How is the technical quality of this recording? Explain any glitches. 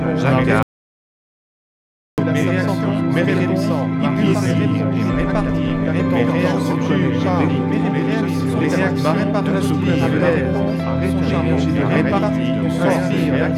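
The recording has one clear glitch. From 0.63 to 2.18 s there is an audio dropout to silence: about 1.55 s of silence, with the sound cutting off and returning abruptly. The likely cause is a momentary loss of input while recording continued. Unlike a natural pause, no room tone remains in the gap.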